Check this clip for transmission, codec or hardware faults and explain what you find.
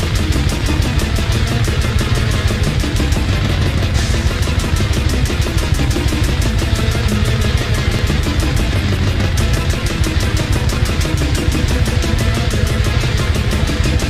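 One transmission fault appears three times: overlap between stream segments, at 3.99–4.02 s, 7.99–8.02 s and 8.96–8.99 s. Overlapping time stamps made the player trim about 30 ms of audio that wasn't duplicated, which fits one-second segments. The sound skips forward without a silent gap, unlike a dropout.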